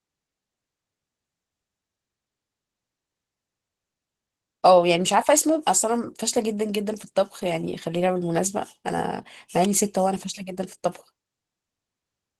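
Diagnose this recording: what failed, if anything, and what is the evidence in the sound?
The speech sounds hoarse and faintly robotic from start to finish. The top end is still present rather than cut away. This is Opus voice compression, a codec-stage fault. The character fits hybrid mode at a low bitrate of about 16 kbps. Linear prediction codes the band below 8 kHz with coarse excitation, and a sparse transform layer covers the rest up to full band.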